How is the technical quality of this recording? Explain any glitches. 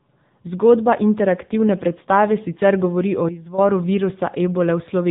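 The recording has two clear faults: narrowband mobile coding throughout, and a brief level drop.

For the whole clip, AMR narrowband mobile codec damage is plainly audible. Nothing passes above 3.8 kHz, and the speech has a buzzy, synthetic quality that fits a bitrate near 8 kbps. Unlike simple low-pass filtering, the voice itself is remodelled.

From 3.29 to 3.58 s, just after "predstave sicer govori o", a sudden gain jump drops speech and background together by about 11 dB with no fade. This is likely an unramped gain change, not a dropout, since the sound continues at a lower level.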